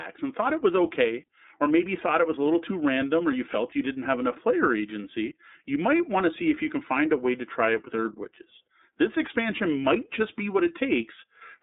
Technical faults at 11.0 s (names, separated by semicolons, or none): iLBC codec